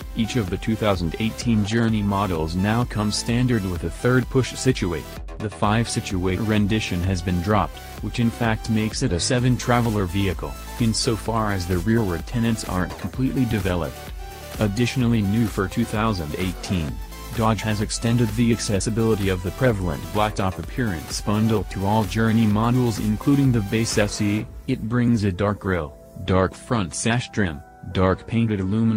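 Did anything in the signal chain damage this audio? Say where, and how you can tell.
No, nothing in the chain damaged it.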